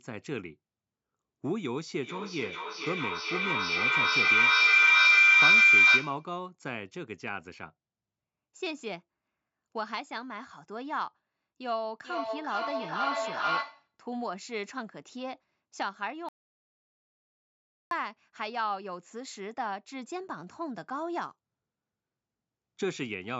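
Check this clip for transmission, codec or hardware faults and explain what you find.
Three faults are present: a feedback howl, a feedback echo between two devices, and an audio dropout to silence.

From 2.02 to 6.34 s there is a feedback howl. Two devices in the same room are joined to the same call, and the path from one's loudspeaker into the other's microphone and back returns more level than it receives. Instead of dying out, each pass reinforces the frequencies the loop favours, so the sound narrows to a tone around 2 kHz that pulses roughly every 0.4 s. At its peak it is about 14 dB louder than the speech.

From 11.94 to 13.97 s the same kind of acoustic loop produces a feedback echo between two devices. One device plays what the other's microphone sent, and that microphone picks it up again. Each echo canceller only removes its own device's playback, so the returning signal passes straight through. 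The speech comes back at a steady interval of roughly 0.4 s, and each repeat sounds thinner and more ringing. The repeats build to about 4 dB above the direct speech.

From 16.29 to 17.91 s there is an audio dropout to silence lasting 1.63 s. The sound cuts off mid-flow and returns just as abruptly. The gap is silent, with no room tone or background at all, which points to the input having been lost while the recorder kept writing silence. The likely cause is a disconnected device, a failed link or an accidental mute. Whatever was said during that gap is unrecoverable.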